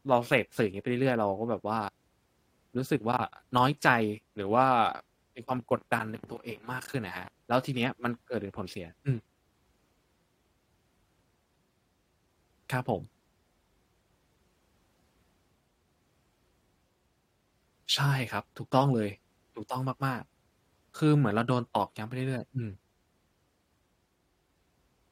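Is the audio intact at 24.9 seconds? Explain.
Yes, the audio is intact at 24.9 seconds, with no dropout, click, distortion or other fault at that moment.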